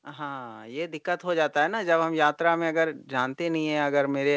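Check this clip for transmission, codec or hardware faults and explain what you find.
There's one fault: automatic gain rising, from 0.05 s through to 4.37 s. The gain control decided the input was too quiet and kept raising its gain, so the voice and background swell upward together, steadily, all heard through a call-path band that stops at 8 kHz.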